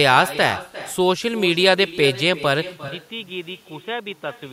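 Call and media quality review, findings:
Echo with no canceller, whole clip. Speech shadowed by a copy about 15 dB down, roughly 0.4 s late. Far-end loudspeaker feeding its mic, no AEC. A distinct delayed repeat, not room reverb smearing into the tail.

Input switched to a poorer device, 2.88 s to end. Abrupt dull, boxy tone, narrower band, about 10 dB quieter, new faint background noise, no gap. Likely a mic or headset call-profile change; tone shifts at once, unlike a gradual codec bandwidth drop.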